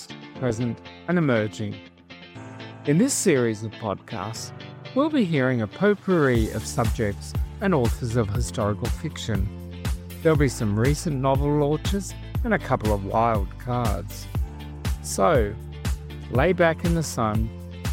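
No technical faults can be heard in this audio, so there are none to describe in time order.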